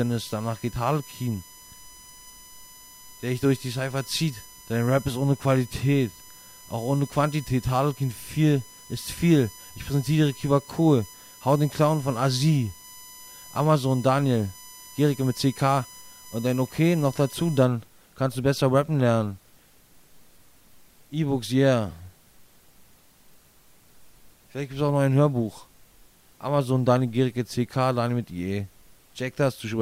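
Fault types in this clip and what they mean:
USB whine, 0 to 17.65 s: a steady, fixed-pitch tone sits under the sound, built on 1 kHz with its strongest component at the 6 kHz harmonic, roughly 25 dB below the programme level. The 1 kHz spacing fits the 1 ms frame rate of a USB bus, whose pulsed current draw leaks into the audio path through shared power or ground. The whine then stops, leaving the rest of the clip without it.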